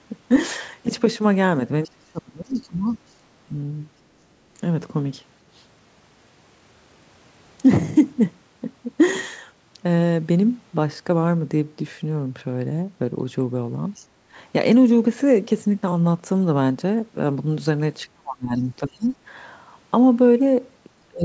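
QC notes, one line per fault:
1.83–1.89 s, 2.53–3.12 s, 13.95–14.05 s and 19.04–19.09 s, other side's voice leaking through: a faint second voice surfaces in brief scraps, roughly 25 to 35 dB below the main speech. This is likely loudspeaker playback picked up by the microphone that the echo canceller failed to fully remove.
1.87–3.54 s, 18.05–19.12 s and 21.08–21.24 s, speech suppressed in double talk: the talker's speech dips sharply, by roughly 30 to 35 dB at its deepest, with about a second affected in each of the first two spans and a short dip at the very end. This is likely the echo canceller turning everything down while both sides spoke at once, unable to separate the talker from the echo.
14.17–14.31 s, background gated by the echo canceller: the room sound briefly drops by about 11 dB for roughly 150 ms, then returns. The canceller clamped the microphone hard while the loudspeaker was playing and let go a moment later.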